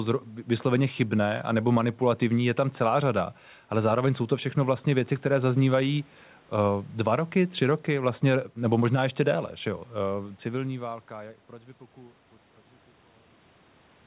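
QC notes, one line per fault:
No faults found.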